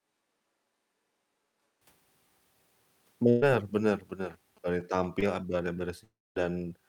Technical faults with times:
0.00-1.81 switch to a distant microphone
3.29-3.44 burst of packet loss
3.77-4.82 GSM signalling bursts
5.20-5.24 short concealed packet loss
6.04-6.37 long network dropout

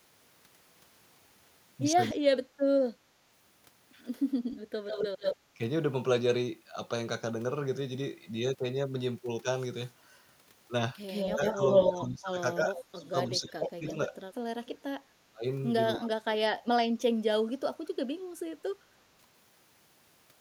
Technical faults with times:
2.11-2.50 speech suppressed in double talk
4.51-5.36 echo leak
11.07-11.92 echo leak
11.35-16.39 speech suppressed in double talk
12.77-13.91 echo leak
17.06-17.93 speech suppressed in double talk

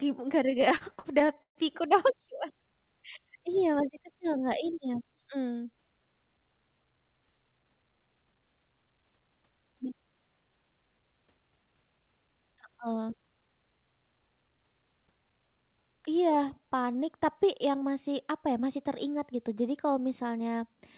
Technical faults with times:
0.50-1.58 repeated stalls (stutter)

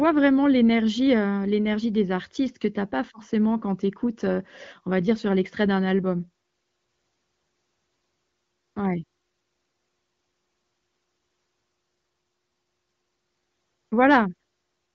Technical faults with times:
none

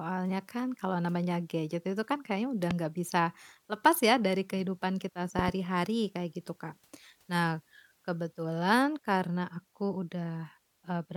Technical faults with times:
2.71-2.73 loud pop
5.39-5.51 loud pop

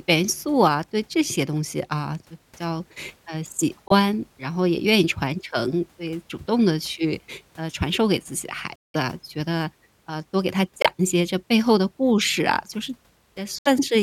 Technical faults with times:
3.88-3.92 Bluetooth dropout
8.76-8.96 Bluetooth dropout
10.82-10.86 Bluetooth dropout
13.59-13.67 Bluetooth dropout

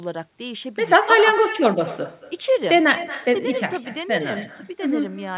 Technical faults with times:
0.00-5.38 echo with no canceller

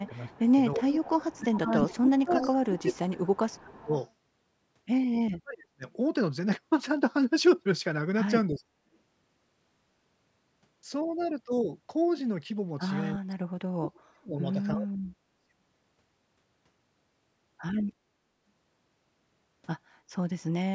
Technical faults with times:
0.02-0.52 echo leak
0.07-3.94 speech suppressed in double talk
0.87-1.32 echo leak
1.68-2.92 echo leak
3.34-4.12 echo leak
5.23-5.84 speech suppressed in double talk
8.48-8.83 speech suppressed in double talk
13.17-15.49 speech suppressed in double talk

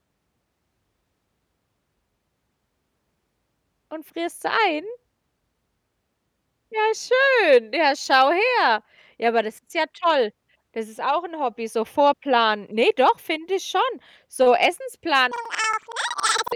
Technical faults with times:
15.32-16.56 planar audio read as interleaved

